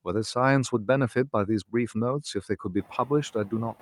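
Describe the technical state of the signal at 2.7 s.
The noise suppressor mistakes parts of the speech for background noise between 2.24 and 2.91 s, pulling them down by up to about 13 dB, so roughly a tenth of a second of soft sounds comes out swallowed and faint. Throughout the clip, the noise suppressor's artifacts come from frame-by-frame cuts of about 13 dB to noisy bands, leaving residual noise that pumps around the speech.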